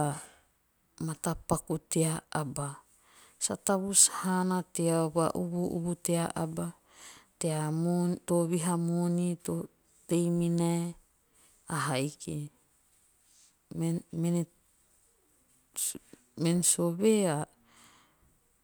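No technical faults can be heard anywhere in the speech. Nothing in the recording points to a stage of the audio chain going wrong.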